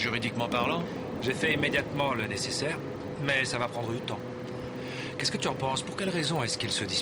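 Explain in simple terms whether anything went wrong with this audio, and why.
Resampler restarted on every block, throughout the whole clip: each 40 ms chunk was converted separately, leaving a small error at every seam, heard as a tick 25 times a second whenever sound is present.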